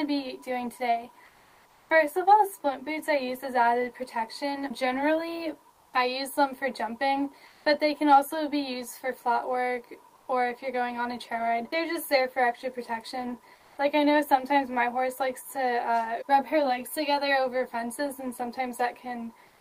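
Comfort noise replaces the real background six times: at 1.25 to 1.89 s, 5.71 to 5.93 s, 7.47 to 7.65 s, 10.15 to 10.27 s, 13.55 to 13.77 s, and 19.47 s to the end. The background sits roughly 32 to 37 dB below the loud parts. In each gap its texture gives way to a flat, even hiss, about 1 to 6 dB quieter. The likely cause is Opus DTX: the sender goes quiet and the receiver fills the pause with synthetic noise.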